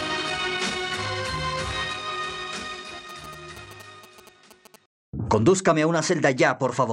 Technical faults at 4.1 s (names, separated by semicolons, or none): GSM signalling bursts